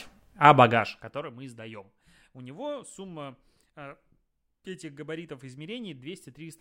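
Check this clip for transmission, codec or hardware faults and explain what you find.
One fault is audible: zipper noise. From 0.65 to 1.34 s, just before "мы сдаем", the level drops by roughly 20 dB in coarse, unsmoothed steps, about a hundred per second. Each jump clicks, giving a fine ticking buzz. The waveform envelope looks like a staircase, and the spectrogram shows faint evenly spaced vertical lines.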